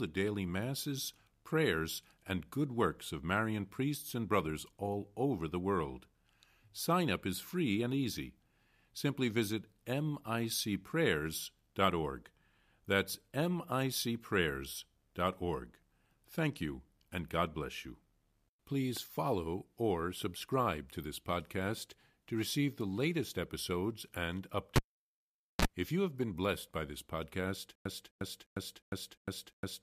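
At 24.76 s, right after "the latest episodes and", a cable pulled and plugged in breaks the speech: a pop, about 0.84 s of near silence, a 33 ms burst of 60 Hz mains buzz while only the plug tip touches, then a second pop at 25.65 s. That buzz and the paired pops set it apart from a simple dropout.

From 27.75 s, after "blessed by this podcast", a stutter with silent gaps runs to the end. A 254 ms fragment plays again six times, each followed by 101.5 ms of dead digital silence, every 355.5 ms. This points to a likely stalled stream retrying its last buffer. Unlike a pure loop, it leaves gaps with nothing in them.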